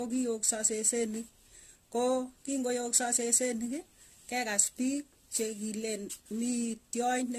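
It's a speech clip with generation loss running the whole way through. The sound is swirly and hollow, with smeared attacks and nothing above 14 kHz, and that's more damage than a single pass at this quality would leave. It fits a 64 kbit/s AAC-LC chain that was likely decoded and re-encoded around seven times. Each pass quantises on a shifted frame grid, so the noise and spectral holes keep piling up.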